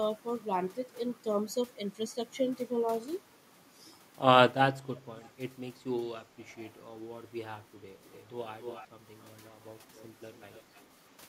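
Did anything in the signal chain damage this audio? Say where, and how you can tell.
Yes, at the call-processing stage. There's an echo leak: a delayed copy of the speech slips back in at 5.19–5.3 s, 8.13–8.24 s, 8.6–8.87 s, 9.95–10.05 s and 10.33–10.81 s. The first copy trails by 383 ms and sits very low. The rest lag by a steady 276 ms and are quiet, though the one around 8.6 s is noticeably louder. This is likely a loudspeaker on the far end feeding its own microphone, with the echo canceller letting some of that residue through.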